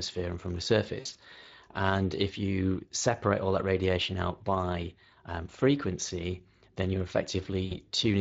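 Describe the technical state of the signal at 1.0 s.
At 1.0 s the speech sits inside a VoIP packet loss event concealed by the speech codec, running from 0.99 to 1.18 s, right after "and from the". The gaps point to roughly 100 ms of missing audio spread over about 160 ms, with the longest unbroken hole near 60 ms. During those holes the decoder keeps repeating its last pitch period and spectral envelope at falling gain. The result is a brief buzzy tone or coloured noise that fades. Because each rebuilt frame feeds the next, the speech stays thin and distorted for a short while after real data resumes.

Underneath this, the whole clip carries Speex codec damage that is plainly audible at this point. The CELP coder at 20.6 kbps leaves its own coding artefacts on the speech rather than a clean sound. Whatever content sits above 8 kHz is only a shaped, noise-like fill, not the original detail.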